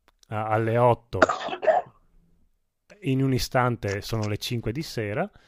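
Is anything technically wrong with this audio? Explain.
No, nothing technically wrong can be heard in this speech recording. There is no fault to point to at any moment in it.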